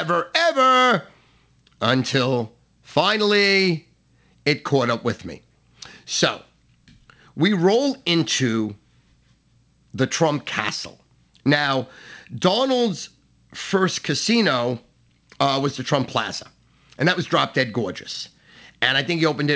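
A speech recording carried over a call link whose band stops at 8 kHz, as fits a wideband G.722 codec at 64 kbps, with nothing technically wrong in it.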